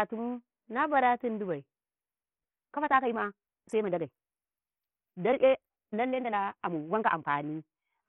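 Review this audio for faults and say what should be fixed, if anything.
Bluetooth SBC compression affects the whole speech clip. The treble is thin and flickering, with a gritty noise riding on the voice. This is likely the result of a starved bit pool, which fits a very low rate of around 48 kbps. The upper sub-bands get few or no bits, and the lower ones are coarsely quantised. On a spectrogram the top end looks patchy, with blocks dropping in and out, and grainy noise fills the spaces between harmonics. To prevent it, record over a wired path, or use a higher-quality Bluetooth codec or a larger bit pool.

A time-stretched section runs from 2.26 to 7.3 s. The speech suddenly moves about 1.64 times faster while its pitch stays the same. It sounds rushed because the stretching, likely done by software fitting the audio to a length, dropped short pieces to save time. On the waveform the syllables bunch closer together. 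A spectrogram shows compressed timing and harmonics that stay at the same height. To prevent it, leave the original timing alone, or trim the content instead of squeezing it.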